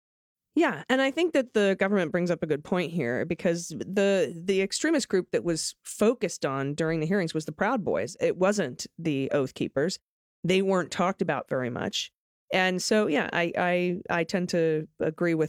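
The speech runs without any audible technical fault at any point in the recording.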